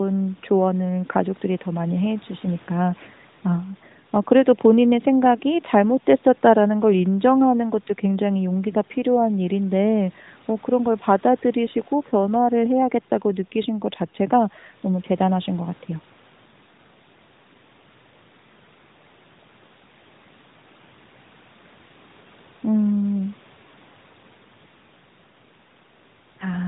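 Nothing here counts as a fault: the speech has the narrowband sound of a mobile call passed through the AMR codec, with nothing above 4 kHz, and the light coding texture fits its highest-rate 12.2 kbps mode.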